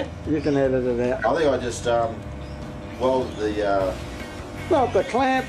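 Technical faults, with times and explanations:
1.19–1.30 s and 4.40–4.49 s, corrupt frame decoded: two short bursts where the decoder played compressed frames whose bits had been flipped. Misread gains and spectral codes put energy at the wrong frequencies, so each event comes out as a brief chirpy blast of noise lasting about as long as a few damaged frames. The first burst peaks around -5 dBFS. The second is much quieter, around -20 dBFS.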